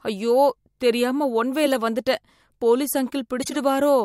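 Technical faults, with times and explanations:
1.65–1.76 s and 3.42–3.56 s, corrupt frame decoded: two short bursts of chirpy, squeaky noise cut across the speech, each peaking around -15 dBFS. Damaged bits in a run of consecutive compressed frames (the lengths suggest several frames each time) were decoded anyway, so misread gains and spectral codes put energy at the wrong frequencies. The artefact lasts about as long as the damaged frames, about 0.1 s and 0.14 s.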